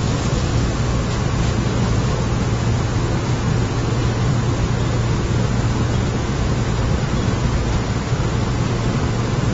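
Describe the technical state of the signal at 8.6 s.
At 8.6 s the audio is band-limited with nothing above 7.6 kHz, a condition present across the whole clip. It sounds dull and smeared, with a warbling, fizzy texture. This is likely AAC compression, consistent with AAC-LC at a low bitrate near 24 kb/s.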